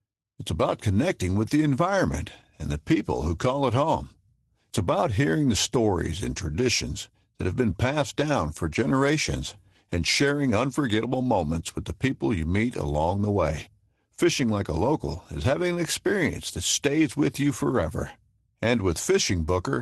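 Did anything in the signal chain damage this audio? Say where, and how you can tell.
No, nothing in the chain damaged this speech. It went through a call path, and the top end stops near 12 kHz, which fits an Opus call codec running at around 24 kbps.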